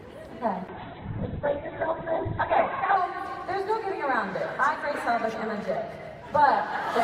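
From 0.68 s to 3.03 s there is a call bitrate drop. The bandwidth estimate fell and the encoder was pushed to a much lower rate. The sound points to a fall from about 48 kbps to roughly 7 kbps, held at the bottom for about 2.3 s. Coding turns coarse and rough, and the top end is cut off at 4 kHz, leaving a muffled, watery sound until full bandwidth returns.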